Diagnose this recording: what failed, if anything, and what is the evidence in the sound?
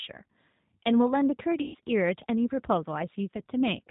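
The speech sounds slightly rough and synthetic throughout, with the top end gone above 4 kHz. This is a codec-stage fault: the G.729 codec (the G.729A variant, which fits an 8 kbit/s stream) rebuilds each frame from a vocal-tract filter, pitch predictor and a few pulses, so the detail is approximated.

From 1.62 to 1.76 s the speech smears out and fades, and stays weak or distorted just afterwards. The cause is VoIP packet loss concealed by the speech codec, a network-stage fault. Roughly 120 ms of packets went missing, so the decoder repeated its last pitch and filter at falling gain, and the following frames recovered slowly from that guessed state.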